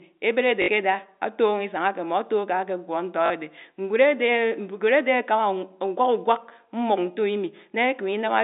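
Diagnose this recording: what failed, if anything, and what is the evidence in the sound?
Packet loss with last packet repeated, a network fault, at 0.62–0.68 s (60 ms) and 3.26–3.30 s (40 ms): a buzzy stutter where the receiver looped the last speech packet, which fits 20 ms packets.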